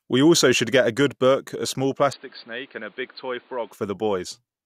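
A short speech clip where, right after "good book a small", at about 2.13 s, the sound abruptly goes dull and boxy and stays that way until about 3.72 s, when the fuller tone snaps back. During that stretch nothing comes through above about 4.7 kHz, the level falls by around 10 dB, and a faint new background noise sits well under the speech. There's no gap at either switch. The likely cause is the input switched to a poorer device mid-recording, a narrower-band mic or headset path, before switching back.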